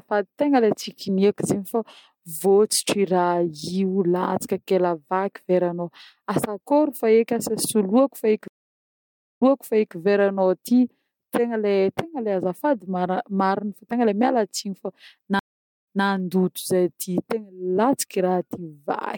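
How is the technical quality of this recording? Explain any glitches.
The recording has two stream reconnect faults. At 8.48 to 9.96 s the audio drops out for about 0.91 s, then resumes roughly 0.58 s earlier, so a stretch of speech repeats. At 15.39 to 16.05 s a shorter 0.45 s silence ends with a 0.21 s jump back. Each time the connection broke, playback stalled, the player reconnected, and a fresh decoder started from a server-resent burst, producing silence followed by a backward repeat.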